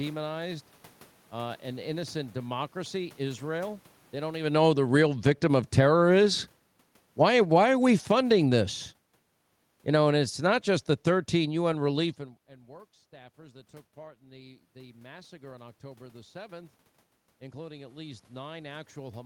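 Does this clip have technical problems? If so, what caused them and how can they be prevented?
Yes. This speech clip has automatic gain falling in three places. From 4.4 to 6.03 s the level sinks by about 12 dB. From 7.06 to 8.62 s it drops by about 6 dB. From 9.79 to 12.18 s, ending just before "and and work staffers", it falls by about 5 dB. Each time the gain control judged the input too loud, or its background noise too strong, and turned itself down slowly. The room noise sinks along with the speech. Fixing the gain prevents this.

There is also automatic gain rising. From 5.14 to 6.59 s the level swells by about 5 dB, overlapping the first fall, so the loudness pumps down and back up. From 13.95 to 16.8 s, just after "work staffers that took", it climbs by about 6 dB. That follows an input drop of about 24 dB as the talker moved away. The control read the input as too quiet and raised its gain, lifting background with speech. 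A steady mouth-to-microphone distance plus fixed gain prevents it.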